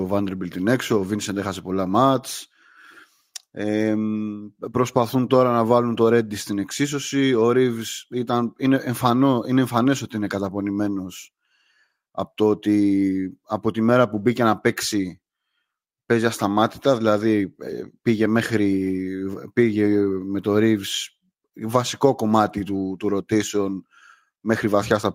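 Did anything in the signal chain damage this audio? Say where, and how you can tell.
No, nothing in the signal chain damaged this speech recording. No stage, from capture through to playback, leaves an audible mark on it.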